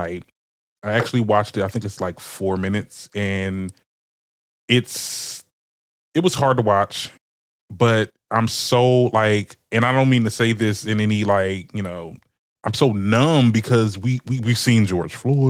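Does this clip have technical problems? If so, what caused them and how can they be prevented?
No, nothing here needs fixing or preventing, and the Opus voice compression on the speech is working normally, leaving only light coding traces.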